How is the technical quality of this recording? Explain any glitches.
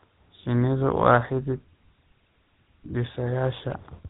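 The technical quality is poor: the whole recording carries clear GSM codec damage, and a short burst of GSM bit errors near the end adds a harsh glitch.

GSM full-rate codec, throughout: The speech has a buzzy, gravelly roughness that fits the 13 kbps full-rate coder. It rebuilds the voice from a vocal-tract filter driven by sparse, regularly spaced pulses. On a spectrogram, everything stops sharply at 4 kHz.

GSM bit errors, 3.70 to 3.75 s: For about 50 ms the voice breaks into a squawking, gargling pop. Corrupted filter, pitch or gain values reached the decoder across what sounds like roughly three 20 ms frames. The spectrogram shows a distorted vertical smear.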